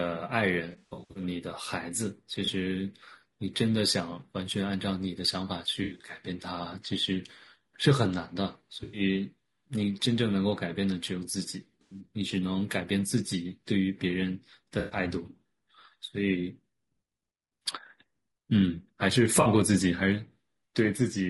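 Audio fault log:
throughout, low-delay AAC compression: the speech is rough and grainy, with a hiss sitting between the pitch harmonics and a top band that sounds thin and synthetic. The likely cause is AAC-ELD at 32 kbps, whose low bitrate leaves too few bits for fine detail. On a spectrogram the harmonic stripes look blurred and speckled with noise, and the upper band appears patchy or smoothed.
0.71–1.23, 2.45–2.49, 5.83–6.09, 8.83–9.01, 11.81–12.00, 14.79–14.99, 19.41–19.47 s, AAC frame loss with concealment: at each of these points the decoder lost data and filled the gap by replaying the last good spectrum. The result is a brief smeared, noisy or phasey patch. The worst is at 0.71–1.23 s, where 300 ms went missing in bursts spread over 440 ms, the longest about 100 ms. At 5.83–6.09 s, 140 ms was lost over 200 ms. On a spectrogram these patches show as frozen, smeared columns with no fresh onsets.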